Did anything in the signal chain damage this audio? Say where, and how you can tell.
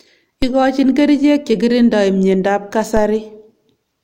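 Yes. DC steps at 0.42 s and 2.97 s point to the converter or analogue input stage. Each time the waveform's zero line jumps by about -10 dBFS, heard as a low thump, and the offset then drains away through a 5 Hz high-pass while the speech continues unchanged.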